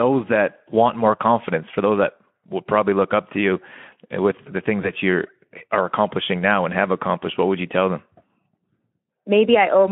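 At 4.81 s, between "the things" and "you are accomplishing now", there is VoIP packet loss concealed by the speech codec. A single frame, which fits a 20 ms gap, went missing, and the decoder filled it by repeating its last pitch and filter at falling gain. This is heard as a brief stretched sound, a buzzy tone or coloured noise that fades. Because each frame builds on the previous one, the speech stays thin until about 4.93 s. On a spectrogram, the harmonics flatten into repeated stripes below the 3.4 kHz Speex band edge. The waveform envelope dips, then recovers.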